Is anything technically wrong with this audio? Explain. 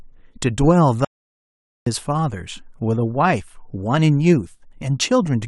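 Yes. Audio dropout to silence from 1.05 to 1.86 s: the speech cuts out to silence for about 0.82 s, likely a lost input written as silence.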